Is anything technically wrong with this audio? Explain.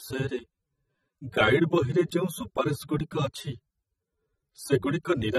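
Yes. Throughout the speech there is plainly audible damage of the kind left by AAC compression, likely AAC-LC at a low rate that fits about 24 kbps. Nothing is present above 15 kHz, so the top end sounds dull, and sibilants and sustained vowels carry a smeared, fizzy warble because sparse quantised frequency lines shift from frame to frame. A plain low-pass filter would dull the sound too, but it would not add this shifting, watery texture.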